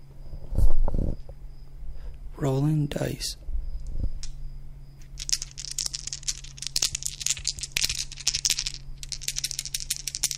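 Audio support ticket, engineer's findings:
Engineer's findings: no audio fault found in this everyday-sound recording.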